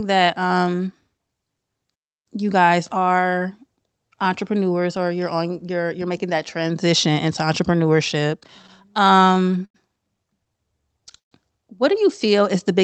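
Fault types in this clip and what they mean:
Playback stall: Output halts mid-flow between 1.94 and 2.27 s, leaving roughly 0.31 s of silence before the audio resumes on "you guys are". The likely cause is the player running short of data or its audio thread being blocked long enough to miss deadlines. Nothing is concealed or filled in; it is a clean dropout followed by a clean restart.
Repeated stalls (stutter): From 8.31 to 9.76 s the audio catches 14 times as late-arriving packets let the jitter buffer drain over and over. Each gap is bridged by extending the preceding sound, 225 ms of concealment in total and about 16% of that span, with the longest single hold at 93 ms. No content is lost, but the passage drags and stutters rather than flowing.
Jitter buffer slow-down: Between 10.57 and 11.02 s the receiver stretches the signal to rebuild its reserve, repeating short pitch-period or pause segments back to back. 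About 48 ms is added across that stretch, so playback runs at roughly 92% speed while the pitch stays put. It comes across as drawn-out, elongated sounds, not as a gap.
Call audio freeze: At 11.18 to 11.33 s the stream stops and is bridged by a brief fading continuation, then about 130 ms of silence, before resuming on "what do you" with nothing dropped. This is likely packets held up in transit, emptying the jitter buffer until they arrive. The playout delay grows by about 133 ms as a result, inserting a pause into the call audio rather than cutting anything out.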